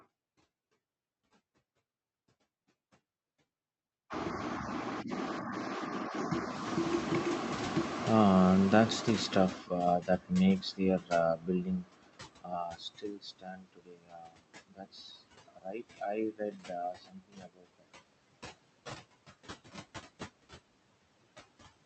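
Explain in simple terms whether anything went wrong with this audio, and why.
Yes, several things went wrong. Throughout the clip, the background noise dips between words and swells under them. These are noise suppressor artifacts: a filter turns down whatever it judges to be steady noise, moment by moment.

Around 6.5 s the room noise suddenly gets much louder. From 6.54 to 9.67 s, that louder noise comes through strongly at first and only fades after about three seconds. This is the noise suppressor catching up: its picture of the background lags behind the sudden change.

Near the end of that, parts of the speech itself turn faint and swallowed at 9.51–9.78, 9.99–10.33, 10.57–10.82, 10.98–11.13, 11.35–15.32, 15.48–16.01, 16.32–16.72 and 16.93–17.88 s. This is speech cut by the noise suppressor. It mistook those stretches of speech for background and turned them down along with it.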